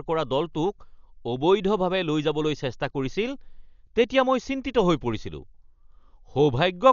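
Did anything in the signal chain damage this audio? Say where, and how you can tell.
Yes. At the codec stage, the speech stays dull from start to finish with nothing above 7 kHz, and a rough, fluttering dither-like noise clings to voiced tones. This points to heavy Dolby Digital compression, likely at about 48 kbps, whose unfunded frequency lines are noise-filled rather than left silent as with a plain low-pass.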